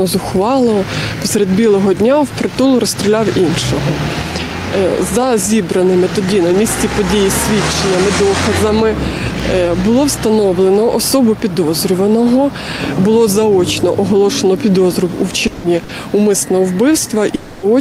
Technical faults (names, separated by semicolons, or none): periodic USB or driver dropouts; long network dropout; lost packet rebuilt from error correction; burst of packet loss